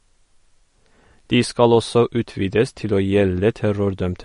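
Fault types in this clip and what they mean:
MP3 compression: The whole speech clip sounds dull and plainly processed, with nothing at all above about 10.6 kHz and a watery, swirling quality where quieter detail drops in and out between frames. This is likely MP3 encoding at a low bitrate, around 40 kbps. With so few bits, the encoder cuts the treble at a fixed point and discards weak frequency lines, and the lines that come and go produce the swirl.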